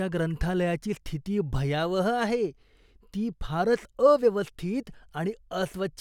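No technical faults are audible.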